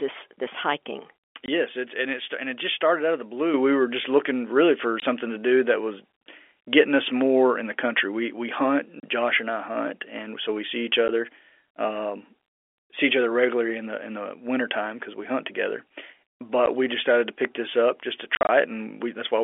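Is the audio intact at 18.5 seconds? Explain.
No. Packet loss filled with silence breaks the speech from 18.35 to 18.49 s. About 90 ms drops out in short silent gaps. Their edges are hard.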